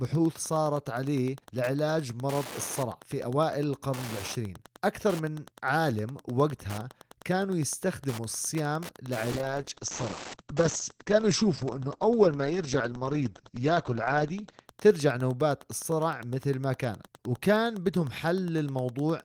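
A faint, steady ticking about ten times a second runs under this speech recording from start to finish, sitting roughly 20 dB below the voice. It is Wi-Fi interference: a nearby radio's beacon, repeating every 102.4 ms, is being picked up and rectified by the audio circuit. From 9.32 s to 14.71 s the speech turns rough and muffled, with the top end cut from 20 kHz to 8 kHz for most of that stretch. This is a call bitrate drop: the encoder was forced to code far more coarsely, which fits a fall from about 32 kbps to 9 kbps, before it recovered.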